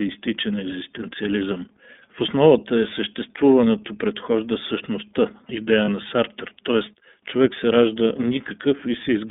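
Speech carried through the iLBC codec: the spectrogram shows energy confined to a band of roughly 200 Hz to 3.6 kHz with nothing above, and the plainly audible rough, slightly synthetic texture of frame-by-frame excitation coding fits the 13.33 kbps mode with 30 ms frames. At 5.85 to 5.88 s there are lost iLBC frames, most likely a single lost 30 ms frame. The decoder repeated the last pitch cycle mixed with noise, so it sounds like a brief buzzy held vowel. A spectrogram shows flat, smeared harmonics there, and the waveform shows repeated similar periods before normal speech resumes at once.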